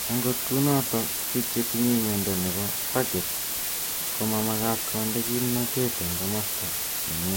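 From start to finish, the speech has been reduced to a very low bit depth with dither, which fits about 4 bits per sample. Dither noise was added before each sample was rounded to so few levels, so the rounding error becomes random rather than following the signal. The result is a steady, even hiss that sits nearly as loud as the speech itself, yet the voice carries no gritty distortion. Only the constant wash of broadband noise masks the quieter detail.

Running through the whole clip as well is what sounds like generation loss, likely from the audio being decoded and re-encoded with a lossy codec around four times, which fits a Vorbis stream near 64 kbit/s. Each pass quantised the spectrum again on a shifted frame grid, so the errors piled up. Nothing remains above 16.6 kHz, the speech has a swirly, hollow, smeared quality, and consonant onsets lose their crisp edges and blur.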